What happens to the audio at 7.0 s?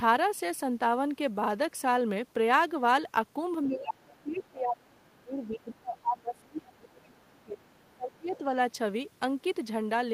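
At 7.0 s three things coincide. Both sides are talking at once, and the echo canceller likely cannot separate the near talker from the loudspeaker echo, so it turns the whole signal down. This speech suppressed in double talk runs from about 3.67 to 7.65 s, roughly four seconds. The voice sinks by as much as about 30 dB at its deepest and comes through dipped rather than at full level.

Inside that stretch, from 6.91 to 7.01 s, the other side's voice leaks through. The far end is playing on the talker's loudspeaker, and the echo canceller likely failed to strip all of it from the microphone. A brief scrap of that second voice slips into the signal. It sits around 30 dB below the main speech, so it registers as a faint trace rather than a clear second talker.

A DC offset is also present at this moment, as it is throughout. The waveform is shifted off zero by a constant amount. That cannot be heard directly, but it eats into headroom and appears as steady energy at the very bottom of the spectrum.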